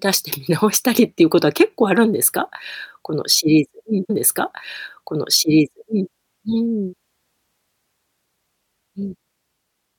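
At 4.09 s the player queued the same stream segment twice, a stream segment repeated fault. From 4.09 to 6.11 s the speech replays a stretch it has just played, adding 2.02 s, with a small blip at the jump back.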